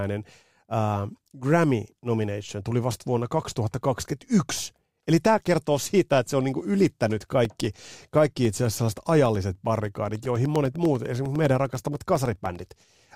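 A blocked USB bus or driver causes periodic USB or driver dropouts from 7.45 s, after "se on niinku ylittänyt", to 13.06 s. Roughly a millisecond of silence every 0.1 s ticks through the speech about fifty times.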